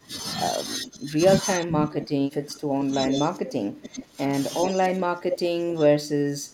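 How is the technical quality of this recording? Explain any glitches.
The quality is poor: speech from both ends of a call overlaps, causing repeated level drops and returning echo throughout.

Speech suppressed in double talk, 0 to 0.12 s, 0.85 to 1.2 s, 1.45 to 4.32 s and 4.66 to 6.53 s: the echo canceller likely mistook this talker for loudspeaker echo while both sides spoke, and turned the signal down. The speech dips by about 20 dB, and by about 25 dB near the end.

Echo leak at 0.84 to 0.89 s, 3.08 to 3.18 s, 3.83 to 4.03 s and 4.65 to 4.7 s: the far end's echo canceller likely failed to remove its loudspeaker pickup, so the voice returns about 0.4 s late in short scraps. These range from faint to nearly as loud as the direct speech.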